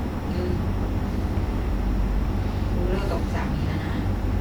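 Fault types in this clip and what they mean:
No faults can be heard in this speech recording.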